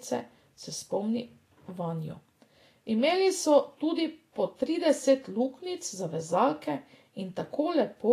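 From start to finish, the speech was likely passed through Vorbis compression at a low setting, with damage that fits a bitrate in the region of 33 kbps. At that rate the encoder keeps only a smooth spectral floor plus a coarse residue, replacing fine treble detail with noise of similar energy and discarding everything above 14.2 kHz. The result is plainly audible: a hissy, grainy top end, roughened tones and softened, smeared consonant onsets.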